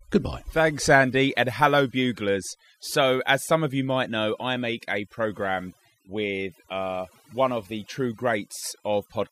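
From start to end, the speech carries overdone noise removal: an aggressive noise reducer muted bands near its noise estimate, taking quiet speech detail too. The background drops and breaks up into twinkling specks; a spectrogram shows scattered isolated dots and ragged, hollowed harmonics.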